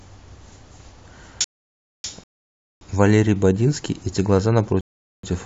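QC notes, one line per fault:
1.44–2.04 s, playback stall: the speech stops mid-flow and the output sits silent for about 0.6 s (598 ms) before sound returns. The likely cause is the player running short of data or its output thread being blocked until it recovered. It is a complete silence far longer than a click or a brief dropout of a few milliseconds, and it comes just before the two rebuffering pauses.
2.24–2.81 s and 4.81–5.23 s, rebuffering stall: twice the speech cuts cleanly to silence, then picks up exactly where it left off, because the player ran out of downloaded audio and waited for more to arrive. Nothing is skipped, but each pause adds time, about 0.58 s and 0.43 s. The seamless continuation across the gap is what separates these from a dropout, where material would be missing.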